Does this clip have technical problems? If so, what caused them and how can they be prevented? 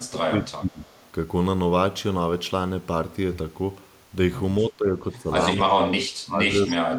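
Yes. Both the far end and this talker were likely speaking at the same moment, and the echo canceller, unable to separate its own talker from the loudspeaker echo, turned everything down. This is speech suppressed in double talk. The voice sinks by roughly 30 dB at 0.0 to 0.91 s and again at 5.57 to 6.5 s. Shallower dips of around 15 to 20 dB come at 4.61 to 4.94 s and 5.14 to 5.28 s, and a drop of about 25 dB runs from 6.67 s to the end. The talker fades or breaks up in pieces across those spans. Using headsets, or an echo canceller with better double-talk detection, would keep the near talker from being ducked.

One side's canceller also likely failed to remove all of what its microphone picked up from its loudspeaker, so part of the signal was sent back. This is echo leak. A delayed copy of the voice arrives about 244 ms behind the original. At 0.82 to 1.08 s it is very faint, around 35 dB down. 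At 6.66 to 6.75 s it is a more audible scrap, about 15 dB below the speech. Using headphones on the loudspeaker side, or lowering its loudspeaker volume, would stop that echo from returning.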